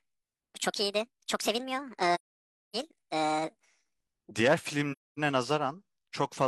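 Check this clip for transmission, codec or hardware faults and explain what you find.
Two kinds of fault are present: a section at the wrong speed and AAC frame loss with muting.

From 0.0 to 4.31 s the speech runs at 1.5 times its recorded speed. Pitch rises with it, by roughly seven semitones. Voices sound high and hurried. The likely cause is playback or editing against the wrong clock.

AAC frame loss with muting occurs at 2.14–2.76 s and 4.92–5.19 s. The gaps last about 597 ms and 256 ms, which fits lost frames the decoder replaced with silence. Overlapping windows fade the sound out and back in, leaving soft-edged holes.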